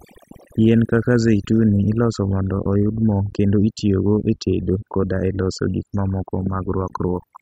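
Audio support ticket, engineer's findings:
Overdone noise removal, throughout the speech. Background gated to near silence with twinkling specks; voice's quiet syllable tails eaten. Probable component: denoiser set too aggressive. Bands near the noise estimate switched off individually. Distinct from low-bitrate codec artefacts: specks sit only where the noise floor was, and the gaps are near-silent rather than smeared or swirly.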